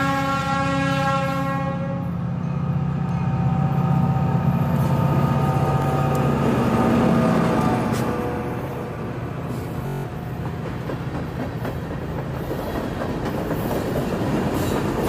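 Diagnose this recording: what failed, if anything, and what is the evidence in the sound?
Bluetooth stutter on the wireless link: packets went missing and the receiver replayed its last buffer. At 5.82–5.85 s one 21 ms slice repeats; at 9.87–10.04 s repeats run 171 ms, a machine-gun buzz fitting about eight lost packets. Playback resumes further on, as if uninterrupted.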